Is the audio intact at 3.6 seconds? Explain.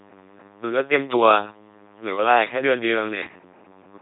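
No. At 3.6 s the speech is still passing through the LPC-10 vocoder, which colours the whole clip. Each frame drives a ten-pole vocal tract filter with either a buzz pulse train or noise, never a mix, so the voice sounds buzzy and robotic, with stray buzz or hiss where voicing is misjudged. The heavy damage and the empty band above 3.8 kHz fit a 2.4 kbit/s coder. Simple band-limiting would dull the sound but keep its natural texture.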